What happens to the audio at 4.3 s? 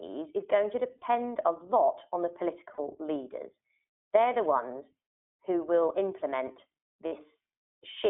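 At 4.3 s the speech sounds thin, rough and slightly synthetic, with nothing above about 3.5 kHz or below 300 Hz. That persists across the whole clip: the iLBC codec codes each 20 ms frame independently, which fits its 15.2 kbps mode.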